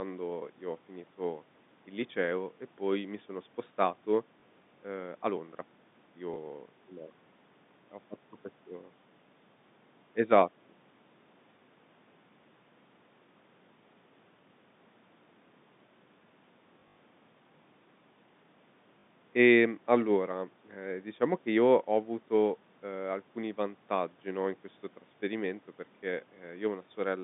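Packet loss with last packet repeated occurs at 4.4, 6.34, 16.8 to 16.96, 19.0 and 20.74 s. Replayed 20 ms chunks cause small blips at the single repeats and a 50 Hz robotic stutter in the runs, not silent dropouts.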